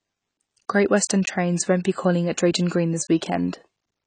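Across the whole speech clip the sound is dull and smeared, with a warbling, fizzy edge on sibilants, likely from AAC compression at a low bitrate, which fits about 24 kbps AAC-LC. A spectrogram shows a hard ceiling, with nothing above 9.3 kHz.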